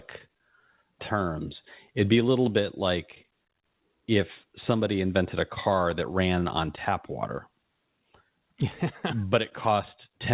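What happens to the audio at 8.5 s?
Nothing goes wrong at 8.5 s: the speech carries on intact through that moment, with only the narrow, band-limited sound of ordinary G.711 telephone coding.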